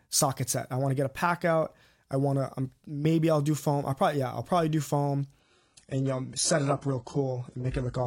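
Speech, with an adaptive stream at a lower bitrate from 5.40 s to the end. Quality drops suddenly, with no gap. Nothing remains above 11.1 kHz. The treble drops and codec artefacts rise. The sound points to a slowed connection forcing a switch to a far lower-bitrate version.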